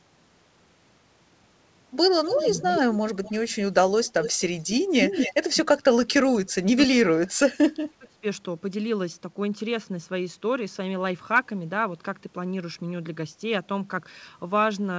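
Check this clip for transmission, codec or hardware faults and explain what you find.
Two faults stand out, an echo leak and speech suppressed in double talk, heard over a G.722 call path with nothing above 8 kHz.

Echo leak at 2.24–2.97, 3.24–3.34, 4.05–4.41, 4.58–4.70 and 4.90–5.34 s. A delayed copy of the speech trails by about 0.25 s, at about 5 to 25 dB below it. A far-end loudspeaker echo escaping the canceller is the likely cause.

Speech suppressed in double talk at 5.62–6.21, 6.44–7.40 and 7.60–8.24 s. The speech dips and cuts out, by as much as about 35 dB. The likely cause is the canceller turning down both its own talker and the loudspeaker echo during overlap.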